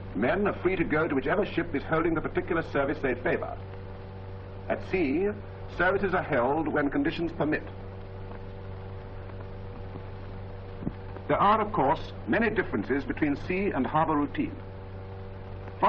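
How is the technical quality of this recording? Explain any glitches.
No technical faults are audible anywhere in this recording.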